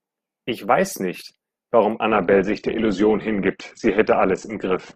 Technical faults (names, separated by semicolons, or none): adaptive stream at a lower bitrate